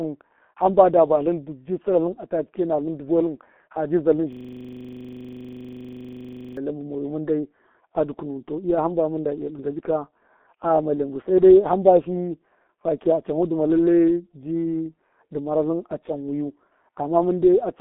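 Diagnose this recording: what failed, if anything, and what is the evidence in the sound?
Codec stage: G.723.1 coding at about 6.3 kbit/s throughout. Nothing above 3.8 kHz survives, leaving the speech muffled and hoarse with smeared consonants.

Driver or buffer stage: a system hang loop from 4.33 to 6.57 s, just after "ha ji zaltṫn". A 40 ms segment repeats 56 times, producing a 25 Hz stutter as the hardware replays its frozen ring buffer.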